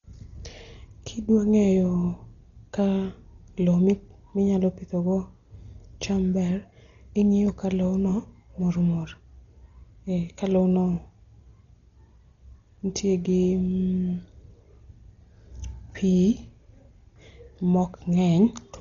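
A speech recording that has likely been through Dolby Digital compression at a very low bitrate, with heavy damage that fits roughly 32 kbps. Starved of bits, the encoder cuts the band and leaves many frequency lines with no real detail, which the decoder fills with noise. From start to finish nothing survives above 7 kHz, so the speech sounds dull, and a rough, fluttering grain clings to its tonal parts.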